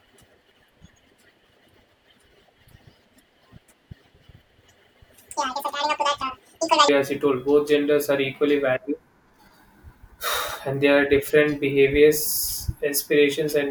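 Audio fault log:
0.00–6.89 s section at the wrong speed: likely played against the wrong clock, so the speech runs at double speed, hurried and raised roughly ten semitones in pitch.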